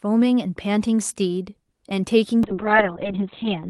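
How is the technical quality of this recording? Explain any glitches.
The recording has one glitch, a call bitrate drop near the end. From 2.44 s to the end, the speech turns rough and muffled. The call codec, likely Opus, was starved of bits, which fits a fall from 32 to about 6 kbps. Coarser coding adds a watery grain, and the audio bandwidth shrinks from 12 kHz to 4 kHz. The top end vanishes for the final 1.26 s.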